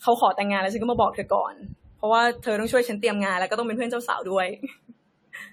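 From start to finish the speech has a swirly, smeared, hollow quality, with consonant attacks blurred and nothing at all above 19.2 kHz. That's generation loss, likely from the audio being decoded and re-encoded about five times, in a way that fits AAC-LC at 64 kbit/s. Each pass quantises again on a shifted frame grid, so the noise piles up, sounding rougher than that bitrate would on a single encode.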